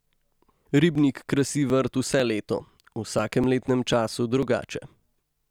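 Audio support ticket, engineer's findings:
Periodic USB or driver dropouts, 0.21–5.42 s: regular ticks every 0.248 s, around 2 ms skipped each. Waveform shows small discontinuities; spectrogram shows thin vertical broadband lines. Likely bus/driver blocking.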